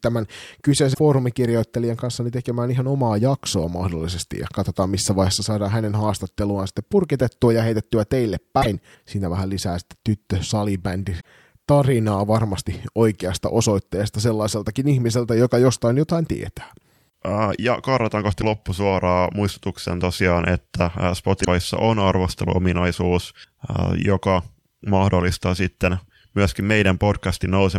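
At 0.90, 8.58, 11.17, 18.38 and 21.41 s, damaged data in a compressed stream makes the decoder misread frames and lose sync for 50 to 100 ms. Each event sounds as a chirp, squawk, click or short hole, and shows as a brief disrupted patch on the waveform and spectrogram.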